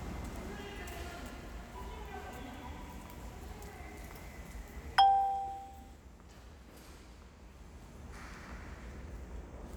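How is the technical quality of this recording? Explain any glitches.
No glitches or dropouts heard.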